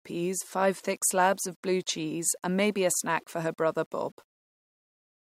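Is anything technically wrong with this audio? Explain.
Yes. Throughout the speech there is a grainy, gritty distortion that rides on the voice and shifts with it. The quiet tails of syllables roughen and sputter, and the softest moments drop to dead silence instead of a smooth noise floor. This is likely low bit depth without dither: the audio appears to have been rounded to very few levels, consistent with about 9 bits, so the error tracks the signal, sitting roughly 40 dB below it. On a waveform, quiet passages look stepped. A spectrogram shows harmonic-like distortion following the speech, with no steady broadband noise in the gaps.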